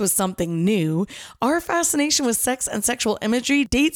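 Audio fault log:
Nothing stood out on listening to the speech in this recording.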